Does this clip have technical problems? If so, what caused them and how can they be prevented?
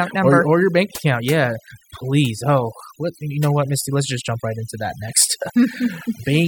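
Yes. Overdone noise removal affects the speech across the whole clip. The noise reducer was set too aggressively, so it pulls individual frequency bands down hard whenever their level sits close to its noise estimate. Low-level parts of the speech fall below that threshold and are removed along with the noise. Between phrases the background drops to near silence scattered with twinkling, chirpy specks. Prevention: apply gentler reduction, cap the maximum attenuation, and reduce noise at the source rather than in post.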